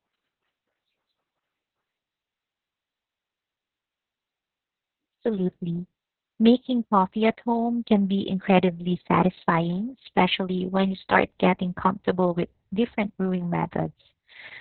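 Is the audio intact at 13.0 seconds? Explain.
No. Opus voice compression runs throughout, including 13.0 s. Its narrowband SILK mode cuts everything above about 4.3 kHz and coarsely codes the excitation, which fits roughly 6 kbps. Speech sounds muffled, hoarse and slightly robotic, which a plain low-pass filter would not cause.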